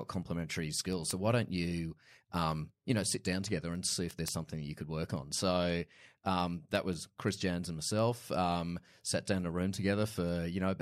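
From 0.23 s to the end, word clock ticks sound about five times per second: a receiving clock roughly 150 ppm off slips single samples, leaving thin vertical lines on a spectrogram.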